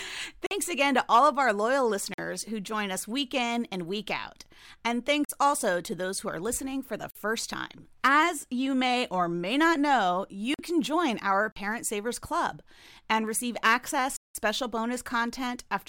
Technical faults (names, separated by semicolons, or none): block of digital silence